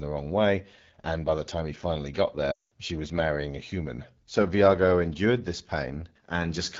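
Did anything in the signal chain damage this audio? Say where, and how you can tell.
Yes. AMR wideband (HD Voice) codec damage runs through the whole clip, at the codec stage. The speech has a rough, raspy texture, and its top band sounds like shaped noise rather than real detail. That fits one of the two lowest AMR-WB modes, most likely 8.85 kbit/s. At that rate the pulse-driven vocal tract model has too few bits to represent the voice cleanly, so the waveform reconstruction turns coarse.

Lost AMR speech frames cause a dropout from 2.51 to 2.72 s, after "time he finally got" and before "she was marrying a". This happens in the network stage. Corrupted frames failed their checksum, and the decoder concealed them by repeating the last good pitch and vocal tract settings with falling gain. The sound drops to near silence within two frames, and the gap lasts about 200 ms, which fits roughly ten consecutive frames. 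The voice then returns weak or rough for a moment.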